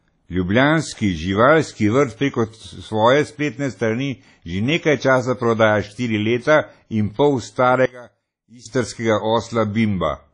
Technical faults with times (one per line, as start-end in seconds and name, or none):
0.00-10.33 WMA compression
7.86-8.65 one channel inverted